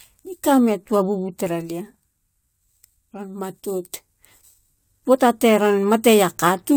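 Throughout the speech, the rate was raised from about 22 kHz by simply repeating samples with no smoothing filter, leaving imaging from sample-and-hold upsampling: a mirrored spectrum fills 11.0 to 22.1 kHz at about 22 dB below the signal, heard as a metallic fizz tracking the speech.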